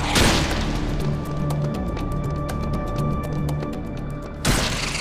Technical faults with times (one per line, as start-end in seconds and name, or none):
0.28-4.75 periodic USB or driver dropouts